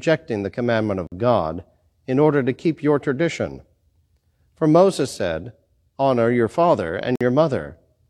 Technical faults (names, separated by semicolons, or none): gap between stream segments